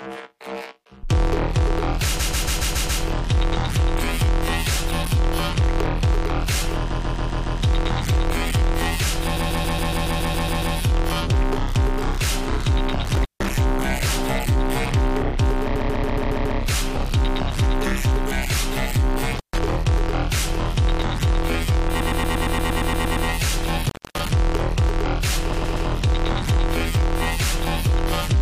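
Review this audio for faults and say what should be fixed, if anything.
Repeated frames occur at 2.18–3.02 s, 6.90–7.60 s, 9.36–10.75 s, 15.75–16.58 s, 21.99–23.27 s and 25.52–25.87 s. Each is a stutter: a short block of audio plays again and again. The block is 139 ms in the first four and 116 ms in the last two, which fits a run of several compressed frames being re-sent. Each event adds between 0.35 s and 1.39 s to the running time. To prevent this, fix the transport or writer so acknowledged frames are never re-sent, and deduplicate by sequence number.

Intermittent contact appears at 13.15–13.51 s, 19.36–19.58 s and 23.84–24.20 s. At each point the sound drops out for 153 ms, 136 ms and 259 ms respectively, with crackle at the edges and faint hiss in the gap. This points to a cable or connector momentarily losing its connection. To prevent this, reseat or replace the suspect cable and connectors, and secure them with strain relief.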